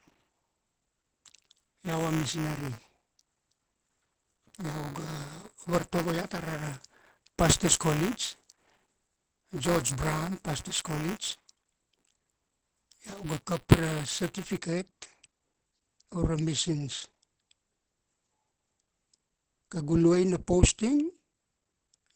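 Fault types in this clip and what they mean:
Opus compression: Throughout, nothing is heard above 8 kHz, and the speech sounds muffled and hoarse, which is plainly audible codec damage. This likely comes from Opus falling back to its SILK speech mode at a low rate around 16 kbps.
Buffer tearing: From 0.0 to 14.58 s, a robotic 188 Hz buzz rides on the speech, which fits a 256-sample buffer. Writer and reader have slipped, so a small slice of each buffer repeats audio from about 15 ms earlier.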